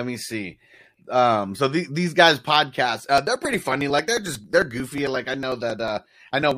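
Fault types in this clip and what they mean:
Periodic USB or driver dropouts: from 3.0 s to 6.51 s, something blocks the audio path every 0.09 s. Each time, roughly 10 ms of speech is skipped outright, giving a steady train of about forty ticks that sound only while the talker is voicing.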